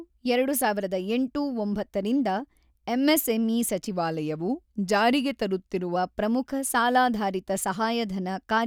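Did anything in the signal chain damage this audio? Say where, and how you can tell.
Yes. From 3.91 s to 5.96 s the speech slows by about 6.2% and drops about 112 cents, just over a semitone. Both shift together, then snap back at once. That coupling points to a playback-rate change, not pitch processing. The stage is the driver or buffer layer. The likely cause is a drift correction step: clock-matching software slowed playback in one jump to refill its buffer, then restored normal rate.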